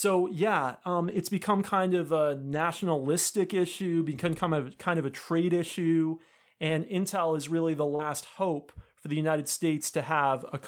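Lost packets rebuilt from error correction come at 0.99–1.21 s, 2.53–2.63 s, 4.71–4.73 s (after "issue become kind", before "kind of a trade") and 6.69 s. Each time, the decoder plays a low-bitrate copy carried in the next packet, so there is no gap, only a briefly rougher, noisier stretch. The 0.99 s stretch lasts 120 ms.

At 7.95–8.01 s, between "is really the" and "hope for the", a short concealed packet loss smears the sound, extrapolating about 34 ms of a 40 ms hole. Unlike the rebuilt frames, this is a guess from the last sound rather than a real copy. Error-correction rebuilding follows immediately at 7.99–8.05 s.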